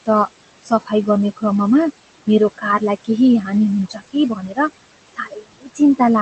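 Noise suppressor artifacts run through the whole recording. The suppressor pulls down whatever bands it judges to be steady noise, frame by frame, by about 18 dB. The room noise, which sits about 14 dB below the speech, drops away in the pauses and comes back under the talking. On a spectrogram the background looks patchy and speckled, with gaps that open between phrases instead of an even floor.

Speech cut by the noise suppressor first shows at 0.62 to 0.92 s, just before "गर्ने क्रममा मेरो कारलाई". About 200 ms of sound is pushed down by up to about 18 dB, so it comes across faint and swallowed. It happens again at 3.89 to 4.15 s (about 150 ms, down about 20 dB) and at 4.35 to 4.59 s (about 200 ms, down about 19 dB). The longest cut is at 5.07 to 5.8 s, about half a second lowered by up to about 22 dB. In each case the suppressor mistook quiet speech for noise. The waveform shows the envelope suddenly shrinking, and the spectrogram shows the energy fading out there.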